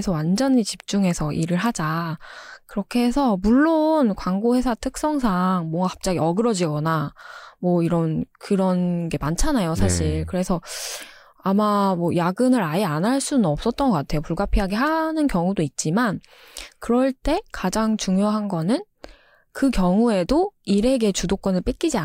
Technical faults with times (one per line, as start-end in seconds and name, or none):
none